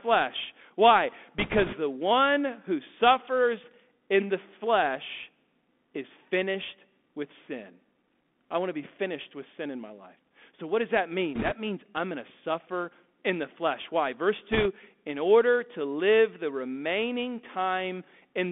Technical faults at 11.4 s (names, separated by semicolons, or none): Bluetooth CVSD headset codec; bit errors on a Bluetooth voice link